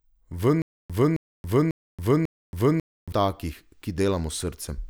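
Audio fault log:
0.62–3.12 s: stutter with silent gaps; a 267 ms fragment repeats four times, 545 ms apart, with digital silence between, likely a stalled stream replaying.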